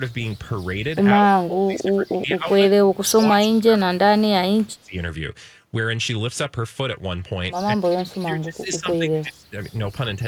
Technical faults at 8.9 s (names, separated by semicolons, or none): speech suppressed in double talk